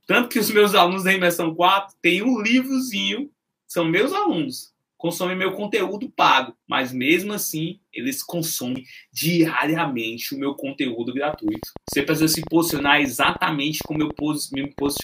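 A train of clicks runs from 11.34 s to 15.01 s: about thirty similar pulses at roughly 8.75 per second, irregularly spaced and about 10 dB above the sound, likely from interference.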